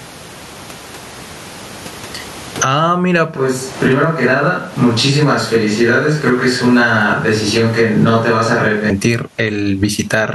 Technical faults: gain pumping; switch to a distant microphone

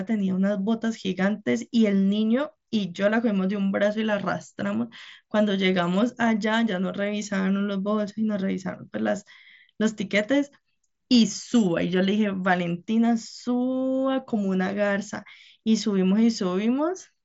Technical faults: none

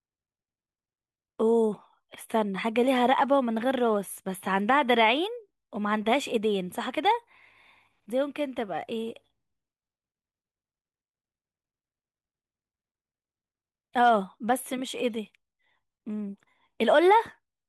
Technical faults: none

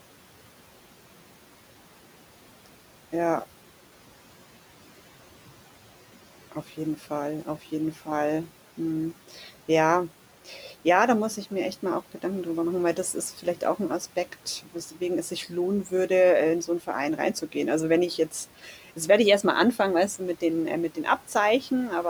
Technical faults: speech cut by the noise suppressor

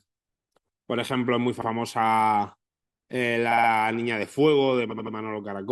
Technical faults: repeated frames

